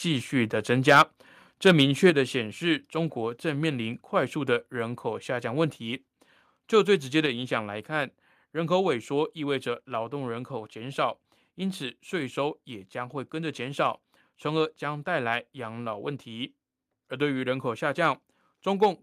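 A speech clip with two distinct level faults. Microphone overload appears at 0.88 to 1.02 s, about 6 dB over full scale with a sizeable share of samples flattened, and at 1.66 to 2.09 s, about 3 dB over with only a small fraction clipped. The peaks are squared off into a harsh crackle, not smeared or pumped as a codec or limiter would leave them, so the likely cause is input gain set too high for the converter. Microphone volume is stepped down at 1.02 s by about 3 dB, at 2.10 s by about 5 dB and at 7.26 s by about 4 dB. Voice and background fall together in a single instant step, not a gradual fade. The first two drops land right after the distorted passages, which points to call software likely cutting the device's input gain in response to clipping.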